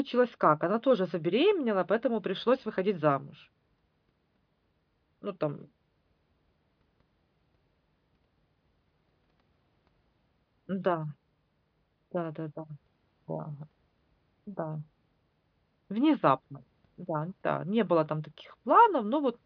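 Nothing goes wrong anywhere in this stretch of speech, so there's no technical fault to point to here.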